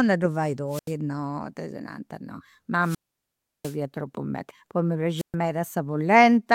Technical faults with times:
0.68-0.94 wireless microphone squelch dropout
2.80-3.77 wireless microphone squelch dropout
5.16-5.35 wireless microphone squelch dropout

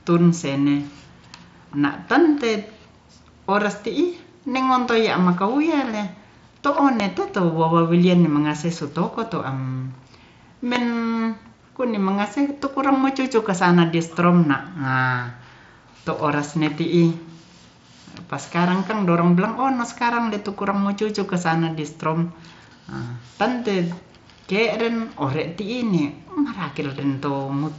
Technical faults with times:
7.00-7.02 loud pop
10.76-10.78 loud pop

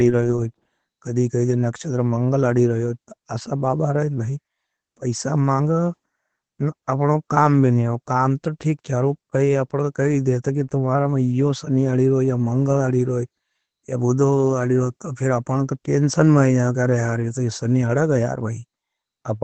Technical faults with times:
0.00-19.43 Opus voice compression

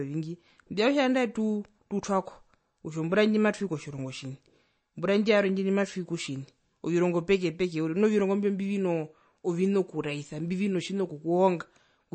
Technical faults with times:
0.00-12.14 MP3 compression

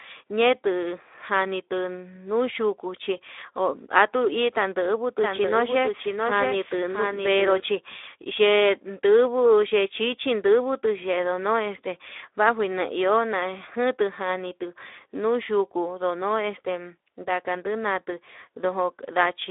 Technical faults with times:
0.00-19.50 Speex codec
5.22-7.60 doubled audio track

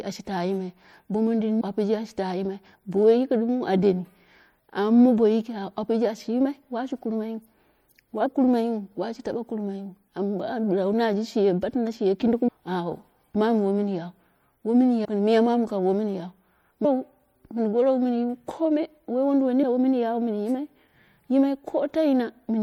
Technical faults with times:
0.00-22.63 MP3 compression
1.60 compressed frames skipped
8.25 compressed frames skipped
12.47 compressed frames skipped
15.04 compressed frames skipped
16.84 compressed frames skipped
19.62 compressed frames skipped

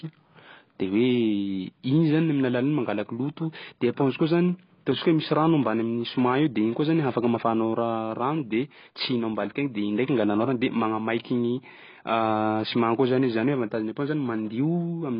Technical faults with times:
0.00-15.19 AAC compression

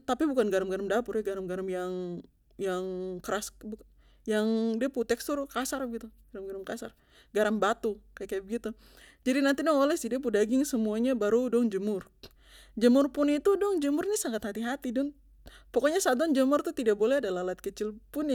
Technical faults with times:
none

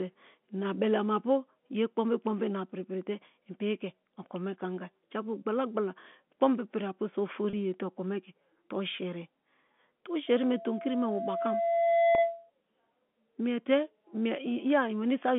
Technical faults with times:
7.50-7.53 packet loss with pitch repetition
10.27-12.50 loudspeaker feedback squeal
12.15-12.18 packet loss with pitch repetition

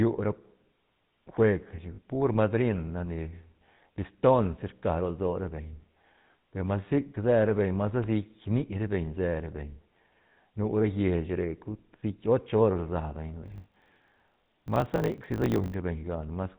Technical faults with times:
0.00-16.59 GSM full-rate codec
1.94-1.99 lost GSM frames
8.04-8.06 loud pop
13.44-15.74 block size mismatch (truncated)

